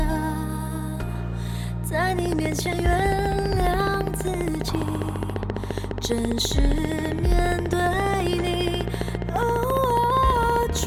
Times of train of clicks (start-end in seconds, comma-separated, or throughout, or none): 2.19-10.84